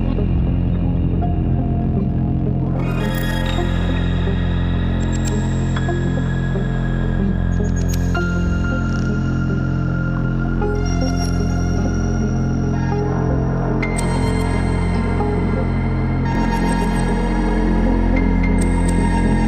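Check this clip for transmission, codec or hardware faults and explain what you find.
One fault appears: a doubled audio track from 16.35 s to the end. A second, slower capture path or an out-of-step edit likely mixes the same audio in again, so an identical, full-band copy trails around 300 ms behind at about equal loudness, starting abruptly, without decay or room colour.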